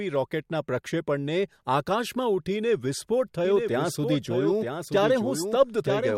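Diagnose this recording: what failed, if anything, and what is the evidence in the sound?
A doubled audio track begins abruptly at 3.45 s and runs to the end. A full-band copy trails the speech by about one second, roughly 5 dB quieter, with no decay or room colour. The likely cause is a second, slower capture path in the driver or buffer stage.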